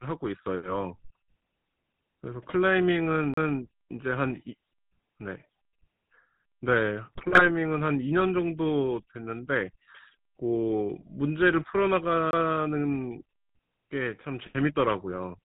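Throughout, the GSM full-rate codec gives the speech a buzzy, gravelly roughness consistent with 13 kbps coding, and the spectrogram shows nothing above 4 kHz. At 3.34 to 3.37 s a CD skip causes a brief mute and tick, then playback resumes from another disc turn; this appears as a short waveform gap and a spectrogram discontinuity. The same happens, more briefly, at 12.31 to 12.33 s. From 7.13 to 7.49 s GSM bit errors corrupt decoder parameters, producing squawks and gargling, with frame-sized level spikes and smeared spectral bands.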